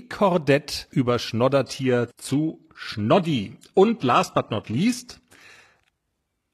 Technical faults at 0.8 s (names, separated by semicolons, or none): none